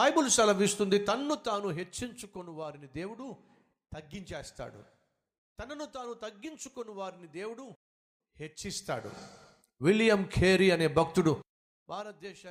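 From 0.98 to 2.28 s, zipper noise: the speech drops roughly 15 dB in audible 2 dB steps, about seven per second, each clicking, unlike a smooth fader glide.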